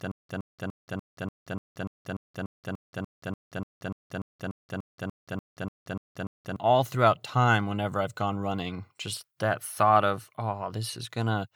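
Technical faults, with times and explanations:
0.0–6.56 s, stutter with silent gaps: already under way, a 115 ms burst repeats 22 times, 179 ms silence between. Likely a stalled stream replaying its last fragment.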